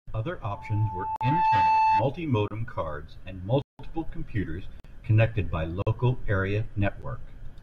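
From 0.46 s to 2.08 s a loudspeaker feedback squeal rises. The microphone is picking up its own loudspeaker and the loop gain passes one at 877 Hz. That tone swells over roughly a second to sit about 5 dB above the speech and stops just before "cards and". A spectrogram shows it as a single bright horizontal line.

Blocks of digital silence cut the speech at 1.16 s (46 ms), 2.48 s (29 ms), 3.62 to 3.79 s (172 ms), 4.80 s (46 ms, just before "connected by"), 5.82 s (46 ms, right after "computers connected by") and 7.02 s (10 ms). The output buffer likely wasn't filled in time, and the 46 ms holes fit a 2048-sample buffer. The longer ones are heard as abrupt dropouts and the 7.02 s one as just a tick or dip, and the waveform shows a flat line with abrupt edges.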